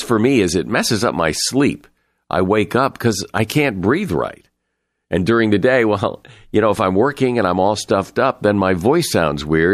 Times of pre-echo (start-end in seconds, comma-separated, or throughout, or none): 3.48